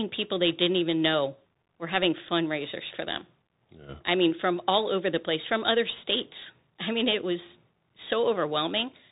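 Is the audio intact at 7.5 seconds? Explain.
No. At 7.5 s the speech is still passing through the Bluetooth CVSD headset codec, which affects the whole clip. It encodes one bit per sample, stepping up or down with an adaptive step size, which fits a 64 kbps stream. On a spectrogram everything stops at a hard ceiling near 4 kHz. The waveform carries a granular hiss floor, and steep, loud peaks are smeared where the step can't keep up, making s sounds scratchy and distorted.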